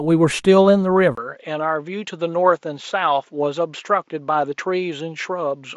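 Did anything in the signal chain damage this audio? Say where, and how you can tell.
Yes. At 1.15 s the audio breaks for about 20 ms, and from there to the end it sounds duller and a few decibels quieter, with nothing above about 7.6 kHz and a faint new noise floor roughly 50 dB below the signal. This points to the capture stage, most likely an input switched to a poorer device: the driver moved recording to a different microphone or headset path with narrower bandwidth, its own gain and its own background noise.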